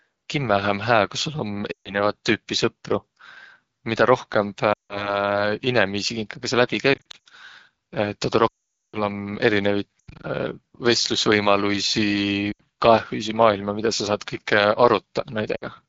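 Throughout, the speech sounds rough and raspy, the damage of the AMR wideband (HD Voice) codec running at 8.85 kbit/s, one of its lowest rates.

Lost AMR speech frames cause dropouts that fall to near silence at 1.71–1.94 s, 4.74–5.18 s (just before "inimiisi kinkaga saq"), 6.93–7.17 s, 8.47–9.03 s, 9.99–10.26 s, 12.51–12.61 s and 15.55–15.65 s. In each, corrupted radio frames made the decoder repeat earlier settings with falling gain. The longest, about 0.46 s, drops to near silence. The ones near 7 s and 10 s are broken into short scattered gaps.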